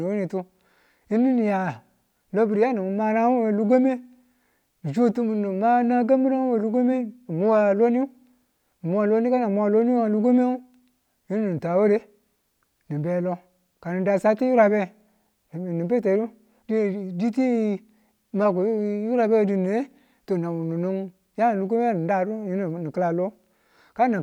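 Nothing technically wrong turns up in this speech recording, so there's nothing to pin to a time or trace back to a cause.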